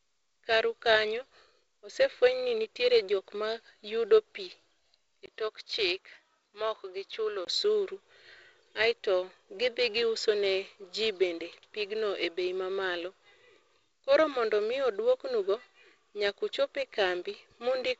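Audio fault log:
5.26–7.47 s, input likely switched to a poorer device: after a 20 ms gap, the sound turns duller and about 5 dB quieter, with nothing above 6.4 kHz against the 7.7 kHz G.722 band, and a faint new noise floor. Unlike a filter, level and noise change together.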